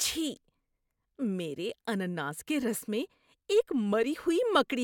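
No technical faults are audible.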